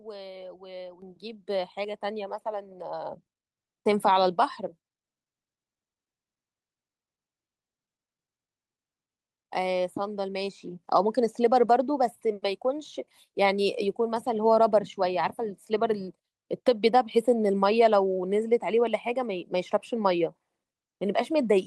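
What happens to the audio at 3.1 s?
At 3.06 s the microphone volume is stepped up by about 3 dB in one jump. The input gain rises, so speech and background get louder together.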